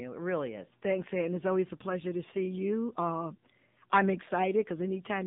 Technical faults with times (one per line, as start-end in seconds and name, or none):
0.00-5.27 AMR narrowband mobile codec